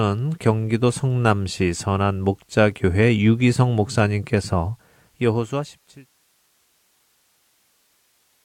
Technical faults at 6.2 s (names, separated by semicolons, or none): none